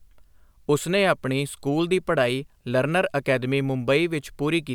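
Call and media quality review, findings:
No faults found in the speech clip. Nothing to raise against any component on this ticket.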